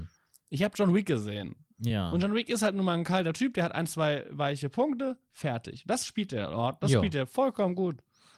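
Nothing in this bit of speech stands out as a technical problem at any point, so there's nothing to flag here.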